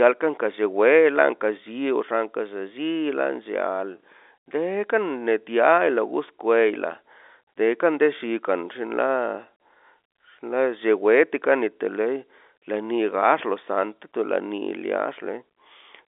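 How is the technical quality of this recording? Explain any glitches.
There are no glitches to explain in the technical quality of this recording, and the speech comes across at telephone bandwidth with nothing above about 3.8 kHz.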